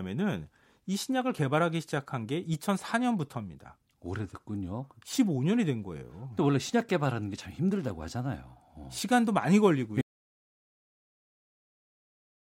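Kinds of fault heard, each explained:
Audio dropout to silence: at 10.02 s the speech stops abruptly and the clip stays silent to the end, with no room tone or noise floor left, unlike a natural pause or fade; the input was likely lost while recording continued.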